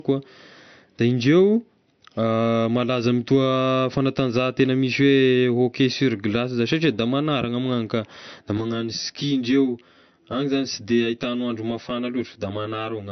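From the start of the speech, the sound is band-limited with nothing above 6.1 kHz. Sibilants are dulled, and MP3-style smearing and swirly artefacts sit on the voice. This is likely low-bitrate audio saved at a high bitrate, consistent with a 48 kbit/s MP3 re-encoded at 192 kbit/s. The second pass adds file size but cannot restore the removed top end or undo the earlier coding damage, so both the cut-off and the artefacts remain throughout.

At 8.58 s the tone turns hollow and phasey until the end. This is channel delay (comb filtering): one channel runs late by roughly 10 ms, and when the channels are summed to mono, the shared content cancels at evenly spaced frequencies. The first notch sits around 40 Hz, and the fixed series of notches above it thins the voice and gives it a tube-like colouration.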